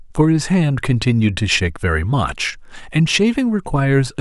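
No technical faults can be heard anywhere in this recording.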